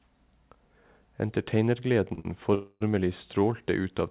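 At 2.14 s the speech snags. A short stall from a late packet holds the sound for about 35 ms. The jitter buffer ran empty, so the receiver stretched the last sound until the packet arrived. A second stall follows straight on at 2.2 s and lasts about 50 ms. Nothing is lost. The speech drags slightly, with a faint buzz, and then resumes where it stopped.

From 2.55 to 2.83 s there is a call audio freeze lasting about 0.26 s. The sound hangs as a fading buzz and never drops to silence. It then carries on from the same point, so a gap has been inserted but no speech is missing. Delayed packets are the likely cause. Throughout, the audio has nothing above 4 kHz, which fits a narrowband call codec such as G.711.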